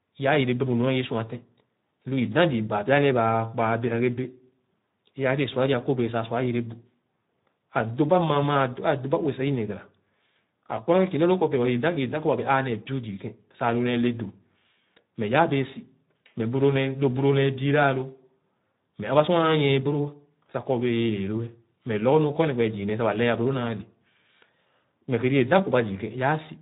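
Speech runs through Speex codec damage for its whole length, and it is plainly audible: the voice sounds hoarse and grainy, which fits a low setting of around 11 kbps. With so few bits for the excitation, the harmonic structure blurs. On a spectrogram the harmonics look smeared and noisy, and the band above 8 kHz is a diffuse noise-like wash instead of distinct detail.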